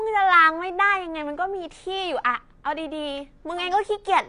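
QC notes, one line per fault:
Throughout, AAC compression: the speech is dull and smeared, with nothing above 10 kHz and a plainly audible warbling, fizzy texture on sustained sounds and sibilants. This is likely AAC-LC coding at a low bitrate, consistent with about 32 kbps, which forces coarse quantisation and a lowered cut-off.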